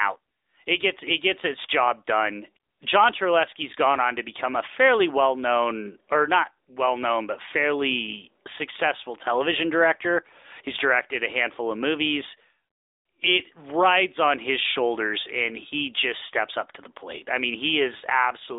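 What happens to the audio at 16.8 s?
At 16.8 s, as throughout, the AMR narrowband mobile codec rebuilds speech from a pulse-driven vocal-tract model at what sounds like 10.2 kbps: nothing above 3.8 kHz, plainly buzzy and synthetic.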